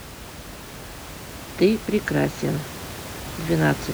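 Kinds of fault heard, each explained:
Nothing stood out as a fault on listening to this clip.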